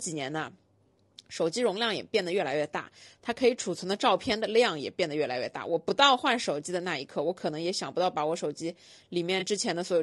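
Throughout, the speech sounds rough and grainy, with noise between harmonics and a dull top band. This is likely low-delay AAC compression, fitting AAC-ELD near 32 kbps. From 9.39 to 9.43 s, AAC frame loss with concealment causes a brief smeared, noisy patch. The decoder covered a gap that suggests one lost 20 ms frame.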